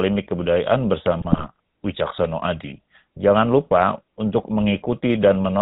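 Speech heard through a GSM full-rate codec for the whole clip, with a plainly audible buzzy, gravelly texture. The codec rebuilds the voice from a vocal-tract filter driven by a coarse, regularly spaced pulse excitation that keeps only a fraction of the original detail, so the natural fine structure of the voice is replaced by a rasping buzz. Nothing above 4 kHz survives, leaving the sound dull and band-limited. The character fits the 13 kbps full-rate scheme. A burst of GSM bit errors runs from 1.20 to 1.46 s, where the voice breaks into squawks, pops and gargling. Corrupted bits in the transmitted filter, pitch and gain parameters make the decoder produce frames with a warped spectrum or sudden level jumps. The damage spans a run of consecutive 20 ms frames, which points to a weak radio link with an error rate of a few percent during that quarter-second.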